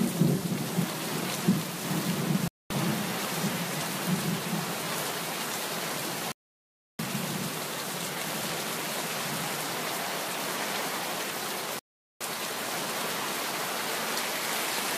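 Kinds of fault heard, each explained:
digital broadcast dropout: the receiver lost valid frames and muted until good data returned. The sound drops to silence at 2.48 s for 0.22 s, at 6.32 s for 0.67 s, and at 11.79 s for 0.42 s, then resumes with the intervening material missing.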